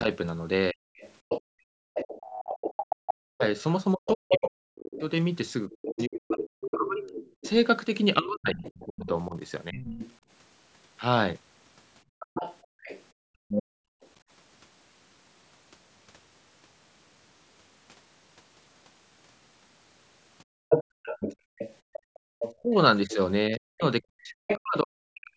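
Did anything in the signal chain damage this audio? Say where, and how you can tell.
Yes. The damage happens in the call processing stage, specifically in the echo canceller.

From 0.0 to 9.82 s and again from 22.53 to 25.37 s, the talker's speech is suppressed in double talk. It dips by as much as roughly 40 dB, adding up to about three seconds in the first span and two in the second. Both sides were likely talking at once, and the canceller could not separate its own talker from the loudspeaker echo, so it attenuated both. This differs from background gating because the speech itself is cut, not only the room sound.

The other side's voice leaks through from 0.96 to 14.08 s, roughly 10 dB under the talker. It returns from 20.69 to 24.59 s, closer at roughly 5 dB under. Here the canceller likely left residual loudspeaker sound in the microphone feed. Unlike suppression, this adds a second voice rather than removing the first. 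The leak overlaps the suppressed spans, which is consistent with a canceller struggling during double talk.

The background is gated by the echo canceller from 1.41 to 2.99 s, 12.04 to 14.02 s, and 20.44 to 22.25 s, with drops of about 35, 36 and 34 dB. Each gated stretch totals half a second to a second. While the loudspeaker was active, the canceller clamped the microphone, so the room sound falls away and then recovers. A network dropout would silence everything abruptly, whereas this only mutes the ambience. The call's normal band limit, with nothing above 8 kHz, is a separate matter and is not a fault.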